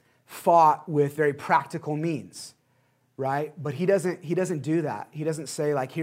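No technical faults are audible anywhere in the speech.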